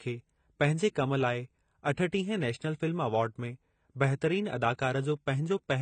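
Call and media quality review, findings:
Dull, smeared speech throughout, nothing above 9.2 kHz, fizzy sibilants. Likely AAC compression, a low-bitrate AAC-LC encode around 24 kbps starving the high bands.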